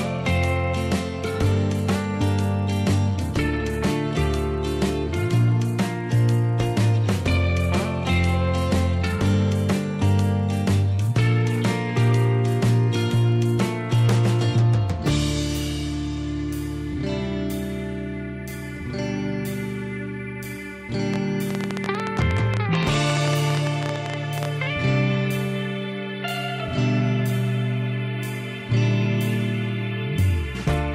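From 21.14 to 24.46 s a fast, uneven ticking sits on top of the audio, around 12 clicks per second and roughly forty in all, standing well above the sound. This train of clicks is likely interference from nearby equipment or a faulty connection or power supply injecting repeated pulses.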